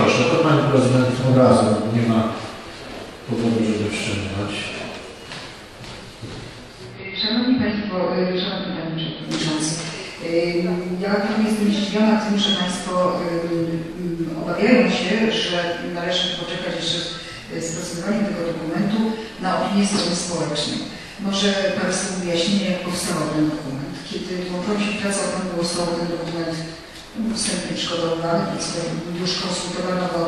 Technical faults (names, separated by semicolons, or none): digital radio blending to analogue